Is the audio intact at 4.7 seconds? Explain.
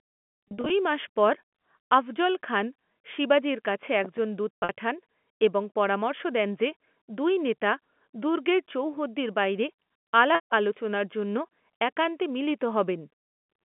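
No. Packet loss with pitch repetition runs from 4.56 to 4.69 s, so 4.7 s falls right at its tail. About 120 ms of audio is missing, scattered over 140 ms, which points to roughly a dozen 10 ms packets. The receiver fills each gap by repeating the last pitch period, giving a held, buzzy tone. The longest run, 70 ms, outlasts the 50 ms fade, so the sound sinks toward silence before cross-fading back in.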